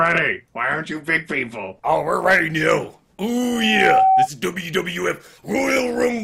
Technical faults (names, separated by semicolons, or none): loudspeaker feedback squeal